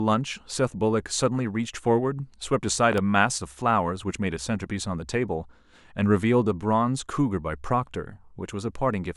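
At 2.93 s a sharp double crack cuts through the speech, two pops in quick succession ending by 3.00 s and standing well above the level of the talking, which carries on underneath without a break. This loud pop is likely an electrical transient, such as a connector being disturbed, a switch, a static discharge or a driver glitch, that added a brief voltage spike to the signal, which the following circuitry shaped into a short pulse.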